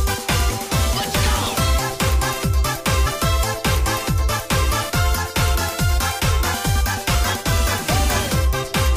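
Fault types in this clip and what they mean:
Compressed frames skipped: at 3.05 s and 7.14 s the audio jumps forward instead of pausing, losing roughly 70 ms and 50 ms of material. Those jumps fit whole 23.2 ms codec frames, about three and then two, never being decoded. Unlike a dropout, nothing goes silent.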